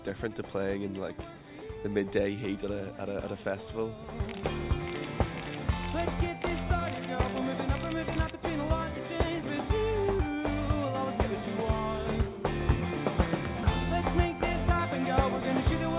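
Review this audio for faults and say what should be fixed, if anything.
No faults found, so nothing needs fixing.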